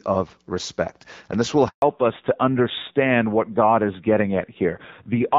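At 1.68 s the speech cuts out and stays silent for 140 ms, until 1.82 s. This is a handover gap: the call switched networks and no speech frames arrived meanwhile. From 1.82 s to the end, the speech sounds duller and rougher, with nothing above 4 kHz. This is a fallback to narrowband, where the call dropped from clear HD Voice wideband coding to narrowband AMR, which fits a rate of about 7.4 kbit/s.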